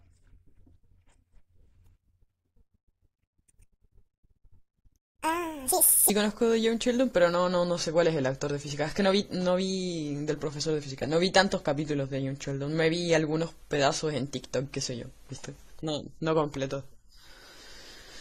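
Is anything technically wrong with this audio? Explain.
Yes, two faults. From 0.0 to 6.1 s the speech runs at 1.78 times normal speed, pitched up about ten semitones, high and hurried. This section at the wrong speed was likely played against a mismatched clock. On a spectrogram, harmonics sit spaced wider and higher, and the waveform's syllables look compressed.

From 7.35 s to the end at 18 s, the adaptive stream drops to a lower bitrate with no gap. The sound turns swirly, which fits a switch from roughly 96 to 32 kbit/s AAC. A spectrogram shows a sudden change to smeared, patchy detail.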